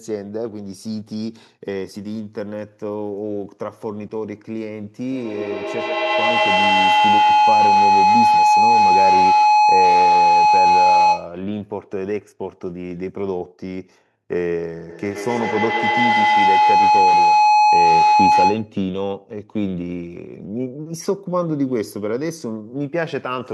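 Feedback howl appears from 5.01 to 11.43 s and again from 14.89 to 18.79 s. A microphone-to-loudspeaker loop gains level on every pass, so the speech builds into a tone near 1 kHz, pulsing about every tenth of a second and peaking about 9 dB above the speech.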